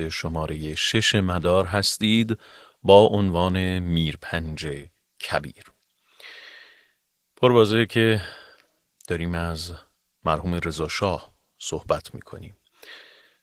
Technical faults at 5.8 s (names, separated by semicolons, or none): Opus voice compression